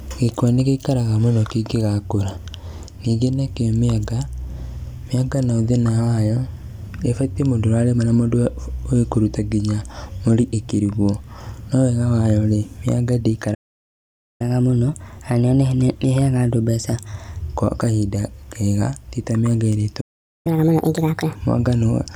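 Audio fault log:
13.54–14.41 s, playback stall: the speech cuts out mid-flow and the output sits silent for about 0.86 s before resuming. A gap like this most likely means the player's buffer ran dry or its thread was held up.
14.41–17.41 s, catch-up at higher speed: from the restart, through "gwa kahinda kega tita", the speech runs at 1.1 times normal speed and sits about a semitone and a half sharp. The player is resampling its backlog to recover the lost time, so tempo and pitch rise together.
20.00–20.47 s, playback stall: right after "kega tita mianga ĩria" the sound stops dead for about 0.44 s, then picks up again, the same dropout-and-resume pattern as the first stall.
20.47–21.35 s, catch-up at higher speed: this recovery is much harsher, running at 1.5 times speed for just under a second, with the pitch thrown up by roughly seven semitones, so the speech sounds strongly chipmunked.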